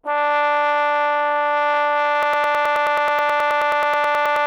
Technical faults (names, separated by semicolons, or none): broken-record loop